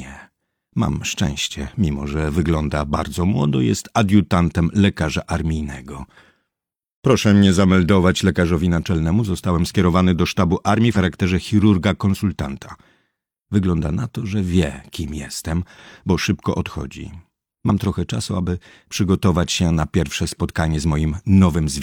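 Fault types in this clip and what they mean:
Damaged data in a compressed stream: corrupted bytes in the encoded stream make the decoder misread frames and lose sync until it locks onto the next valid frame header. This produces two brief blips, each about 50 ms, at 10.92 to 10.97 s and 17.65 to 17.70 s.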